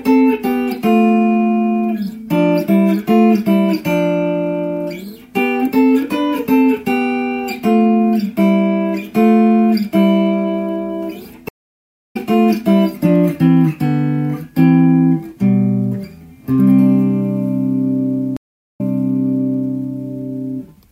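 At 11.49 s the audio goes silent for 0.66 s and returns by 12.17 s about 0.7 s further on, skipping material. That is a stream reconnect: the connection dropped and a fresh decoder rejoined mid-stream. A second reconnect runs from 18.37 to 19.78 s, with 0.43 s of silence, then resumes 0.98 s earlier, replaying a stretch already heard. Unlike a plain dropout, which picks up where it stopped, each restart lands at a different point in the stream.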